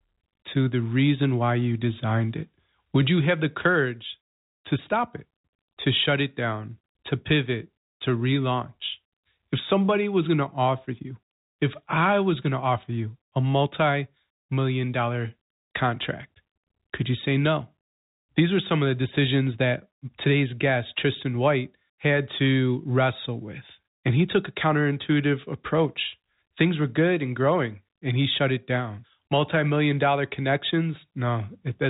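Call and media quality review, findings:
No findings on the speech: the audio sits in the expected G.711 telephone band, nothing above 4 kHz, with only the format's faint level-tracking quantisation floor beneath it.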